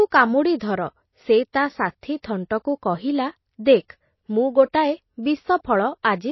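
Throughout the speech, the treble stops dead at 5.8 kHz and the remaining detail sounds watery and swirly, with chirpy s sounds. This is likely MP3 compression, and the damage fits a very low bitrate around 24 kbps, where the encoder drops weak frequency content frame by frame. At 1.53 s, 2.23 s and 3.88 s, pre-echo puts a short hiss about 15 to 16 ms ahead of sharp onsets. The codec's quantisation noise, sized for the loud attack, spreads back into the quiet moment before it, leaving those attacks smeared and soft.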